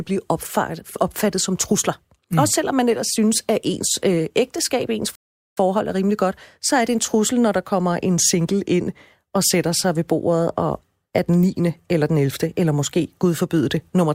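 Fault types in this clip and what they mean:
Rebuffering stall: the player used up its downloaded audio and had to halt playback until more data arrived, so a gap of silence is inserted rather than anything being dropped. In this speech clip, right after "ens øh ægteskab ens" the sound cuts out at 5.15 s and stays silent until 5.57 s, adding about 0.42 s, then picks up exactly where it stopped with "er rimelig godt så", nothing missing.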